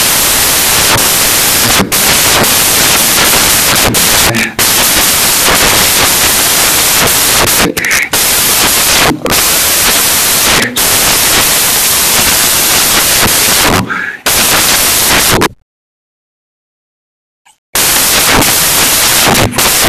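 From start to end, the reader assembled each sample from the wrong bytes, turning fast-changing low bits into dominant values: the speech comes with loud, harsh broadband noise, close to white on loud sounds.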